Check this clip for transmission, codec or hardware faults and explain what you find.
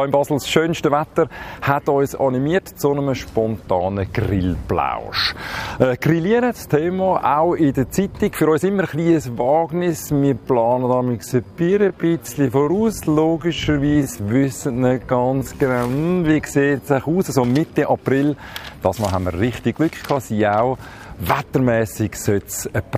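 One fault stands out. From 9.01 to 16.97 s the sound abruptly slows to about 0.65 times its pace with pitch unchanged, so it drags, a time-stretched section, likely from software padding the audio to a length by repeating short pieces.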